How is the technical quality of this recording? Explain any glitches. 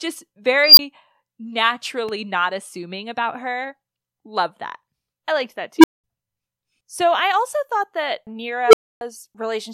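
The speech recording has four audible glitches: three bursts from an unstable filter and one loud pop.

Unstable filter, at 0.64–0.79 s, 5.78–6.04 s and 8.67–9.01 s. A recursive filter's feedback runs away, so a tone balloons until it clips and the arithmetic overflows. The first is a high squeal near 5 kHz that builds over about 130 ms and drops out for 20 ms. The later two are lower hums, near 300 Hz and 400 Hz, that swell within about 55–63 ms and then fall silent for 200 ms and 280 ms.

Loud pop, at 2.09–2.11 s. A single sharp click lands a few dB above the speech, which continues beneath it. It is likely a brief voltage step, such as a switch or driver glitch, that the following circuitry shaped into a short thump.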